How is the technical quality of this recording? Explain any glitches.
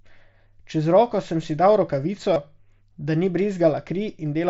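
The one glitch is a short dropout in the speech, masked by the receiver's concealment, heard over the wideband mSBC headset codec, which passes speech up to about 8 kHz with only light graininess.

Concealed Bluetooth headset packet loss occurs at 2.34–2.36 s. For roughly 23 ms, which fits about three consecutive lost packets, no audio arrived from the headset, so the phone filled the gap by repeating the closest-matching recent stretch of waveform. That patch is heard as a brief buzzy, steady-level tone, with a slight warble as the real signal resumes.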